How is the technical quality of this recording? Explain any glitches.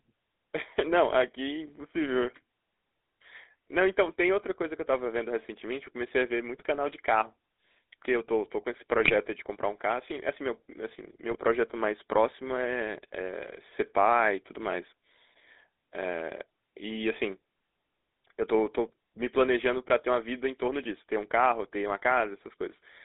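The recording sounds like a degraded mobile phone call, with a constant codec coloration and three brief bursts of corruption.

Throughout, the speech has a buzzy, gravelly roughness and a narrow band of roughly 250 Hz to 3.7 kHz. This is the GSM full-rate codec, consistent with 13 kbps. It rebuilds the voice from a vocal-tract model driven by sparse, regularly spaced pulses.

At 6.55–6.64 s, 9.04–9.13 s and 11.31–11.38 s, the voice breaks into short squawks and gargling pops. These are GSM bit errors: corrupted filter, pitch or gain values reach the decoder and distort the spectrum or level for a few frames.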